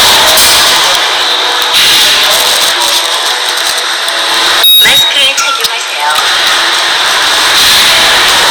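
The clip is a recording of sounds with hard clipping throughout: driven about 20 dB past the ceiling, roughly a fifth of the waveform is sliced flat, so every loud event becomes harsh fuzz. The abrupt, non-rounded tops spray high harmonics, unlike softer, warmer saturation.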